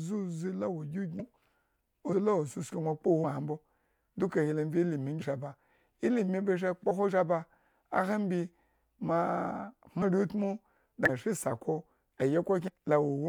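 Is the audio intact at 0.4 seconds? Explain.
Yes, at 0.4 seconds the speech plays through intact, with no dropout, click or distortion at that moment.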